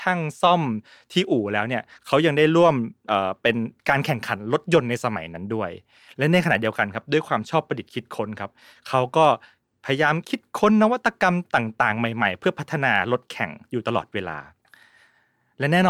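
From 0.10 s to 15.89 s, clock slip clicks run through the whole speech at a steady rate of roughly one every 20 ms, a fine rattling texture. The likely cause is two unsynchronised clocks differing by around 0.1 percent, each slip dropping or repeating a single sample.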